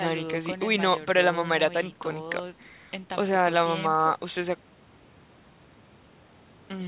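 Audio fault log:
No faults are present in the speech. The content stops at about 4 kHz, which points to a narrowband call codec such as G.711 A-law at 64 kbps.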